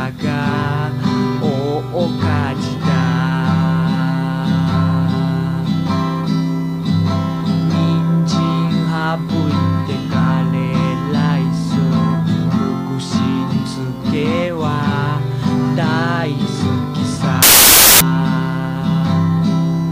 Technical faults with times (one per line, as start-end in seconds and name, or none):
17.42-18.01 samples built from the wrong bytes